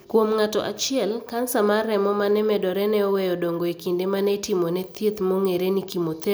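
No technical faults are audible.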